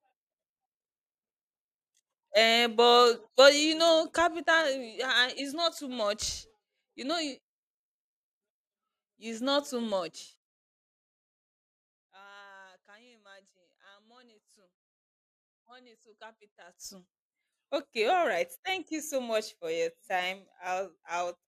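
Zipper noise runs from 9.88 to 11.22 s in this speech recording, right after "it's not too": the level falls about 25 dB in unsmoothed 2 dB steps, roughly fifteen a second, each step clicking audibly.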